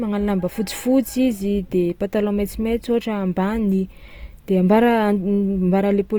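Speech, with a likely cause of Opus compression across the whole clip, in CELT mode at a rate that fits 24 kbps. Short of bits, the encoder fills thin bands with folded or noise content, so the audio sounds plainly rough and grainy, while the bandwidth stays full up to about 20.2 kHz.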